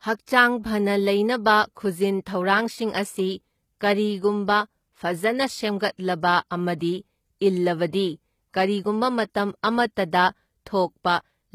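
Throughout the speech, HE-AAC compression damage is plainly audible, likely from a low bitrate around 20 kbps. The treble above the coded band is rebuilt from copied lower bands, so s sounds turn gritty and lispy, with nothing present above 14.9 kHz.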